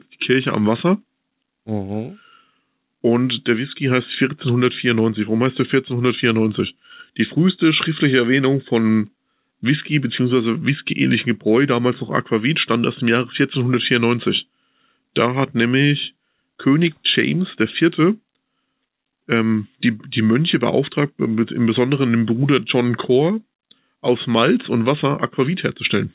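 No technical faults are audible.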